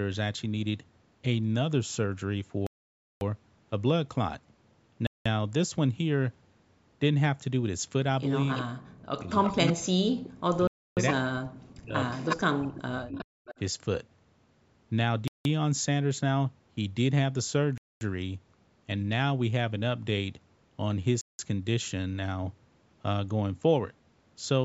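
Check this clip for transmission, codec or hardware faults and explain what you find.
Three kinds of fault turn up here, all pointing to a call routed over Bluetooth with a loudspeaker on the far end. The bandwidth, topping out at 8 kHz with the lowest bass trimmed, is just normal call microphone processing.

Bluetooth stall: at 2.67–3.21 s, 5.07–5.26 s, 10.67–10.97 s, 15.28–15.45 s, 17.78–18.01 s and 21.21–21.39 s the sound drops to dead silence, about 0.55 s in the first case and roughly 0.2–0.3 s in the others, then resumes. That's likely the headset buffer running dry while interference held packets up.

Echo leak: at 8.54 s, 9.43–10.29 s and 12.11–13.59 s you hear a copy of the speech trailing 360 ms behind, about 10 dB down, then about 5 dB down in the last stretch. The far end's canceller likely missed part of its loudspeaker pickup.

Speech suppressed in double talk: at 8.62–9.85 s, 10.56–11.97 s and 12.55–13.15 s the main talker ducks hard, up to around 40 dB, while the other side is active, likely the canceller muting both because it couldn't tell them apart.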